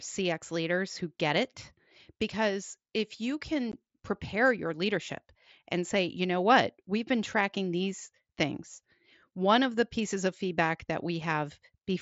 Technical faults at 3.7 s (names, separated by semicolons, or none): unconcealed Bluetooth headset packet loss